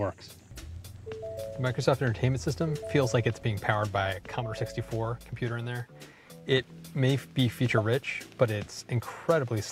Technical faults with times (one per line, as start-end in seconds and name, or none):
4.13-6.52 sudden gain jump